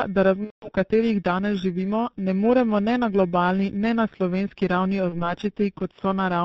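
Speech coded through G.723.1 at 6.3 kbit/s: nothing survives above 4 kHz, and the slow, coarse frame-by-frame model leaves the voice muffled and hoarse with smeared consonants. Periodic clock jitter at roughly 2 kHz wobbles the converter's sampling instants, so every component carries sidebands spaced about 2 kHz either side. That gives a rough, metallic edge riding on voiced sound, strongest on higher content and absent in pauses. VoIP packet loss concealed by the speech codec appears twice. From 0.45 to 0.71 s, just before "katerih danes živimo ne", the decoder extrapolates its last pitch and filter with fading gain. That fits about six consecutive 30 ms frames lost. At 5.09 to 5.35 s, right after "ne na slovenski ravni", a shorter gap consistent with a single lost frame leaves the voice weakened or distorted while the decoder state recovers.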